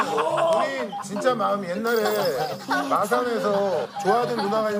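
A single sharp tick at 0.53 s, broadband and unrelated to the surrounding sound, reaching about -10 dBFS. This is a bit error spike: a flipped bit in memory or on a digital link threw three consecutive samples off by a power of two before the values returned.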